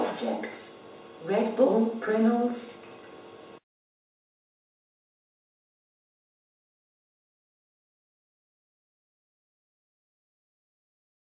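No technical faults can be heard anywhere in this audio.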